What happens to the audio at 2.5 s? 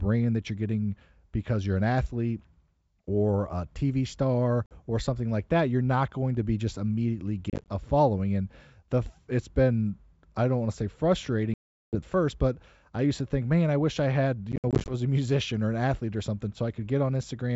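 Nothing goes wrong at 2.5 s: the speech passes through intact, carried by G.722 wideband telephone coding with at most a faint trace of its coding.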